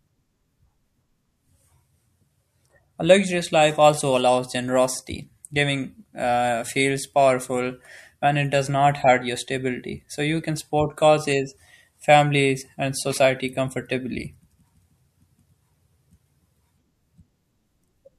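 At 4.00 s, between "luxurious life" and "allows generosity", the speech briefly smears into a soft blip and jumps ahead about 50 ms. This is compressed frames being skipped. A couple of frames never played, consistent with 24 ms frames, and their overlap blurs the join.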